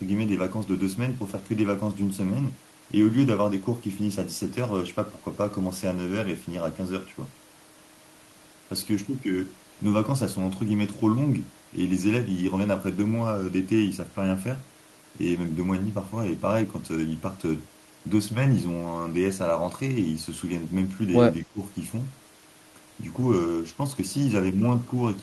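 At 21.46 s the speech dips sharply, by something like 15 dB, and recovers by 21.6 s. This is speech suppressed in double talk. The likely cause is an echo canceller mistaking overlapping talk for echo. It briefly turns the talker down.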